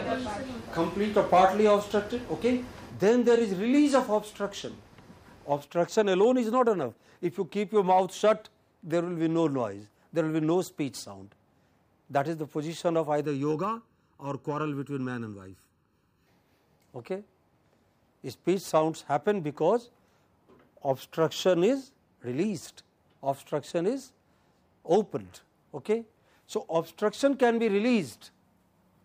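From 13.25 to 16.27 s, channel delay (comb filtering) appears: one channel arrives under a millisecond late, and summing to mono cancels shared content at evenly spaced frequencies, the first near 700 Hz. The sound turns hollow and phasey, with fixed spectral notches.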